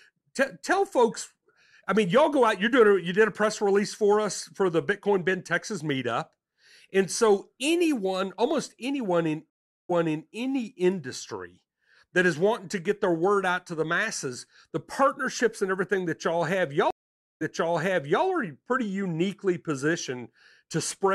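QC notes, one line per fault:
9.50–10.31 s and 16.91–18.24 s, stream reconnect: the connection dropped, leaving a gap of 0.39 s after "anyone almost anyone in" and 0.50 s after "everything that y'all have". A fresh decoder then picked up from a server resend, so the sound resumes 0.42 s and 0.84 s earlier and repeats material, the first rejoining before "any industry that is". On the waveform, each is a flat dead span followed by a duplicated segment; the spectrogram shows a blank column, then a repeated pattern.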